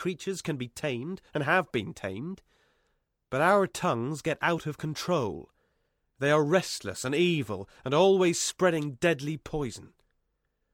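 No technical faults can be heard anywhere in the recording; the signal stays continuous and stable throughout.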